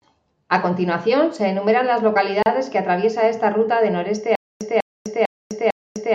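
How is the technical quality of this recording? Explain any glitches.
The recording has two distinct faults: a brief dropout mid-sentence and a stutter that runs to the end of the clip.

At 2.43 s, between "continuación se enumeran las" and "que atraviesa esta ruta", a gap at a join of encoded pieces cuts the speech for 35 ms. Two separately encoded segments were butted together untrimmed, so encoder start delay and final-frame padding leave a short silence, its edges smeared by the codec, before the speech resumes where it stopped.

From 4.35 s to the end, after "esta ruta de noreste", a stutter with silent gaps sets in. A 196 ms fragment replays four times, each followed by about 254 ms of digital silence, repeating every 450 ms. The likely cause is a stalled stream replaying its last buffer on each retry and then running empty. The speech that should have followed is lost.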